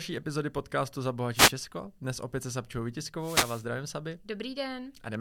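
At 1.34 to 1.53 s and again at 3.19 to 3.66 s, wireless microphone noise hits: the FM signal fades, receiver noise rises, and a short swish of static is heard.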